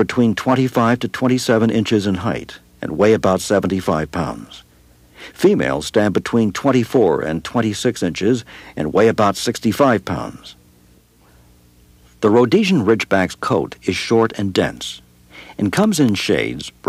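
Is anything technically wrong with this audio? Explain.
Yes. From 15.84 s to 16.84 s there are periodic USB or driver dropouts. A background task stalls the audio path every 0.25 s. Each time a tiny slice of audio, on the order of a tenth of a millisecond, is lost and replaced by silence. That happens about five times before the clip ends. The result is a run of evenly spaced ticks, heard only where there is signal underneath.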